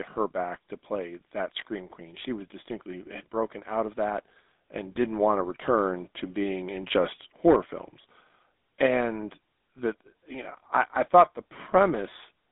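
Speech runs through a GSM full-rate codec for the whole clip. The band sits between 250 Hz and 3.7 kHz, with nothing above 3.8 kHz. A plainly audible buzzy, gravelly roughness comes from coarse pulse-driven excitation, which fits the 13 kbps full-rate coder.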